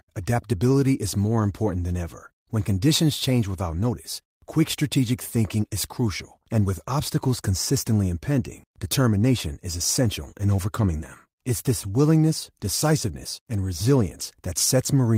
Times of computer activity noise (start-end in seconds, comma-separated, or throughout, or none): none